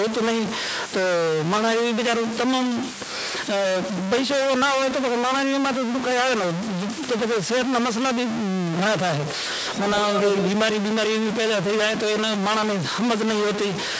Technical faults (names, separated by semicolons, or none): stuck bit; echo leak